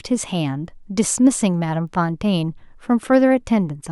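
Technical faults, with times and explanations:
0.66 to 3.09 s, word clock ticks: about three sharp ticks of uneven strength fall roughly once a second over the speech. Each is a single sample dropped or repeated as the receiving clock, off by roughly 15 ppm, slides past the sender's.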